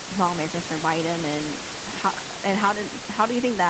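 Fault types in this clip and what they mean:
No faults can be heard anywhere in this speech.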